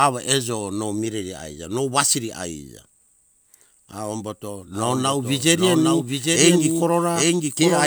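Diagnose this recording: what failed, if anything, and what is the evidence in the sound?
From 4.74 s to the end, a doubled audio track is audible: a second, full-band copy of the speech trails the original by roughly 0.7 s, about 5 dB quieter, and appears abruptly rather than building up. Unlike acoustic echo or reverb, it has no decay tail, no room colouring and no further repeats. The likely cause is a second capture of the same signal through a slower routing path, or an edit that left two misaligned copies overlapping.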